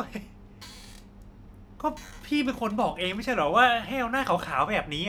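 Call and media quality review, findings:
No audible faults found in the speech recording; nothing to raise against any component.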